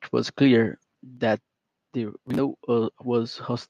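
A speech clip with two sudden level drops, at 1.17 s by about 4 dB and at 3.48 s by about 1 dB, likely the microphone volume stepped down by the call software's input gain control. On the waveform the envelope shrinks abruptly, and a spectrogram shows every band dimming together.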